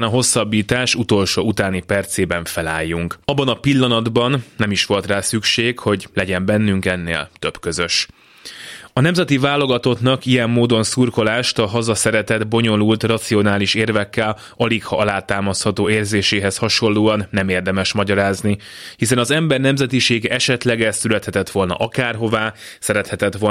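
No technical faults can be heard anywhere in the speech. There is nothing to mark at any point in the recording.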